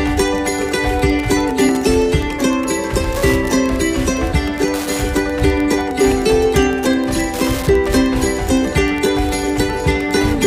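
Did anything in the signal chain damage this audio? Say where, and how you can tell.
Yes. The damage is in the analogue wiring. Wi-Fi interference runs through the whole clip. A steady ticking sits under the sound from start to finish, repeating every 102.4 ms, about ten times a second. It is roughly 20 dB below the wanted signal. That period matches a Wi-Fi beacon. A radio near the audio circuit is transmitting, and some junction in the analogue path rectifies the bursts into audible clicks.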